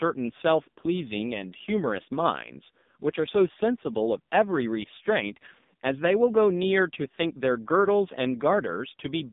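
From start to finish the speech carries the sound of the AMR narrowband mobile codec. Nothing reaches above 3.8 kHz, the band sits roughly between 150 Hz and 3.7 kHz, and the heavy coding damage points to a low mode around 5.9 kbps. Sparse pulses driving a vocal-tract model give the voice a buzzy, synthetic edge. That buzz is what separates it from a plain telephone-band filter, which would narrow the sound without making it artificial.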